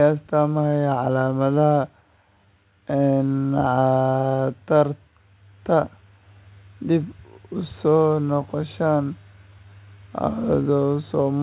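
Nothing stood out on listening to this speech clip, which came through a call path whose band stops at about 4 kHz, consistent with a narrowband telephone codec such as G.711 A-law at 64 kbps.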